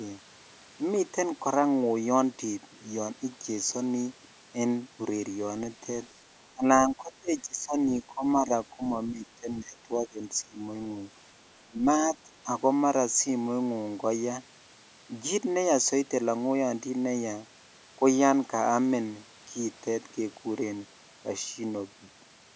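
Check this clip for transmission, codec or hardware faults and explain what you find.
There's one fault: speech suppressed in double talk, at 6.54, 6.87 to 7.76, 8.0 to 8.81, 9.07 to 10.19, 10.42, 11.64 and 12.12 s. The speech keeps ducking, sometimes by about 20 to 25 dB, in choppy bursts. The likely cause is an echo canceller mistaking overlapping far-end talk for echo and clamping both. The call's mic processing caps the band at 8 kHz.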